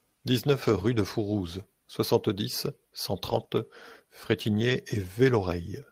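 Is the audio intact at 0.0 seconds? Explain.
Yes, at 0.0 seconds the audio is intact, with no dropout, click, distortion or other fault to be heard at that moment.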